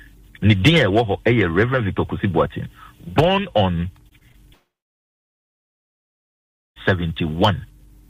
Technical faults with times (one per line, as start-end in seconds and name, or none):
4.09-4.36 repeated packet loss (robotic sound)
4.54-6.78 long network dropout